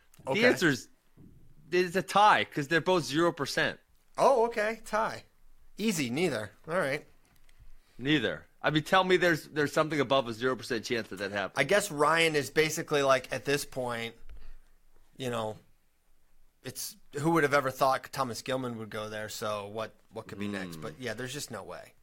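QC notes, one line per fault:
No faults heard across the full speech clip; nothing to log.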